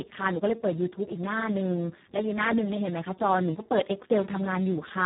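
Speex codec damage runs through the whole speech clip: the sound is hoarse, noisy and edging toward robotic, with nothing above 3.9 kHz. The excitation is starved of bits, and the heavy damage points to a very low Speex setting around 4 kbps.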